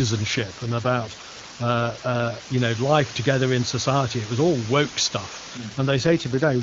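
Right from the start, and for the whole clip, there's a steady, even hiss sitting under the speech. That's low bit depth with dither. The audio has been squeezed down to roughly 5 bits, but because dither was added before rounding, the quantisation error comes out as flat white noise instead of gritty distortion. It's loud, though, only around 10 dB below the speech, so it never really fades into the background.

From 0.37 to 2.57 s, ending just before "know life together in", the speech turns rougher and more synthetic. The band stays the same and there's no dropout. That's an AMR rate drop. The AMR-WB (HD Voice) codec, which is clean at its normal rate, has been told to spend fewer bits on the speech itself, and the sound fits a step from 23.85 down to about 8.85 kbit/s. The same thing happens again from 5.57 s, right after "was all woke stuff", and lasts to 6.62 s.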